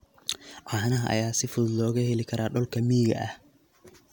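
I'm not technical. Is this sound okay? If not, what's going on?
Yes, nothing in the recording points to a technical problem: the signal stays steady and intact the whole way, with nothing cutting in, dropping out or getting in its way.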